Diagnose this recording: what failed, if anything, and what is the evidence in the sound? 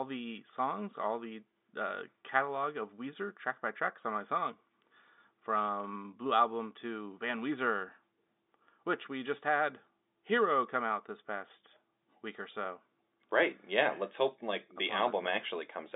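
No fault detected.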